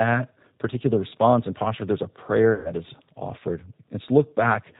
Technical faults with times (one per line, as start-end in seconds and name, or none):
0.00-4.79 G.729 codec
2.55-2.73 VoIP packet loss concealed by the speech codec